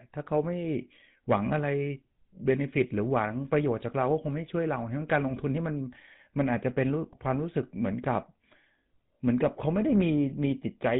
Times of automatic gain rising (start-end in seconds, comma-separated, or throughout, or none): none